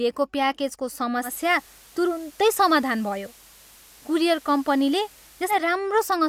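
From 1.22 to 5.59 s the digital radio blends to analogue FM over 113 ms: hiss about 25 dB down, spectrogram cut flat above 15 kHz.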